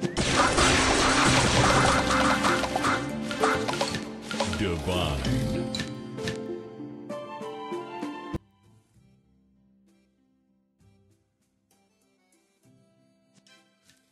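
From 8.36 s to the end at 14.12 s, the likely cause is one channel inverted: one side of the stereo pair has its polarity flipped, so when the two sides are combined, everything they share cancels. The level falls by about 32 dB in an instant, and the centred content, background included, all but disappears. What remains is a faint residue made only of the small differences between the channels.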